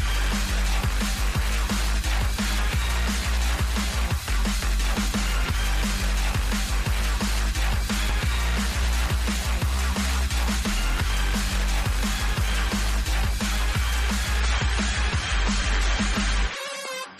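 At 14.40 s the audio switches abruptly, with no gap, to an adaptive stream at a lower bitrate. Treble vanishes above 13.9 kHz and codec smearing rises, fitting a 128 to 32 kbit/s MP3 drop.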